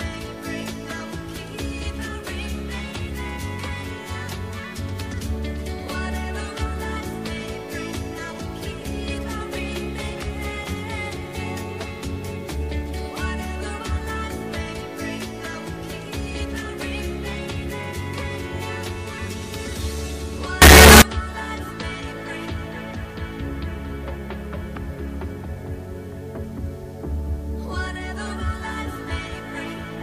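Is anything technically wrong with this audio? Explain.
Yes. From 20.62 to 21.02 s the sound becomes a very loud, harsh buzz in which soft sounds are as loud as strong ones. The likely cause is signed and unsigned mixed up in the 8-bit samples: with the top bit flipped, every zero crossing jumps across the whole range.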